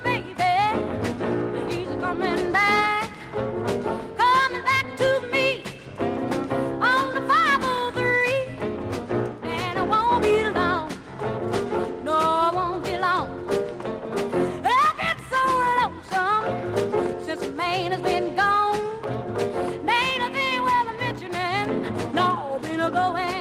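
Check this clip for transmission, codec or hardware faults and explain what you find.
Nothing in the way of transmission, codec or hardware trouble turns up here, so there's nothing to flag.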